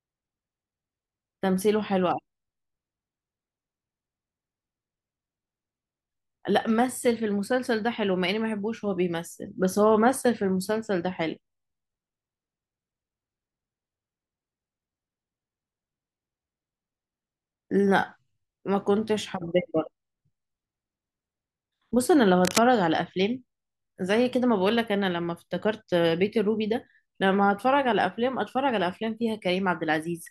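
At 22.44 to 22.63 s, a burst of cable scratch noise rustles just under the speech, likely a worn connector shifting; denser and more irregular than isolated clicks.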